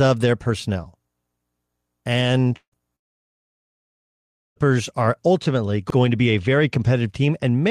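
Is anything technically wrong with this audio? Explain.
Yes. A likely long network dropout hit twice. From 2.56 to 2.75 s, and again from 2.96 to 4.59 s, audio stopped arriving and the receiver stretched the last sound into a fading buzz before silence. The second gap loses about 1.6 s, and the audio resumes at "are ultimately".

Overlapping chunks appear between 5.90 and 5.95 s, between "are ultimately" and "to be a very". Each 2-second chunk began before the previous one ended, so 50 ms replays as a brief stutter.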